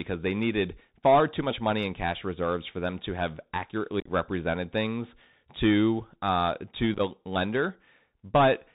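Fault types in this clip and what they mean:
Bluetooth CVSD headset codec: the link sends speech as one-bit up/down steps, so nothing above 4 kHz survives, sibilants turn scratchy and granular hiss runs underneath.
Unconcealed Bluetooth headset packet loss: dropped headset packets leave abrupt gaps that chop and crackle the speech, around 4.00 to 4.11 s and 6.95 to 7.01 s.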